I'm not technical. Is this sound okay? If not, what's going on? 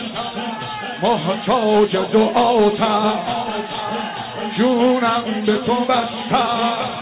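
Yes, nothing stood out on listening; it sounds like audio carried over an ordinary phone-call line, which holds back everything above about 4 kHz, and that is normal for that kind of connection.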